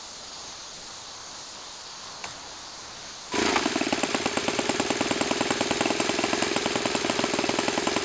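A voice detector at the sending end likely took the audio for background and stopped transmitting, leaving the receiver to fill the gaps with comfort noise. The sound is dropped by the voice detector from 0 to 2.24 s and again from 2.33 to 3.32 s. Each stretch gives way to steady noise or near silence, with a brief return of the real sound around 2.3 s. Nothing is heard above 8 kHz, which fits a G.722 wideband call codec.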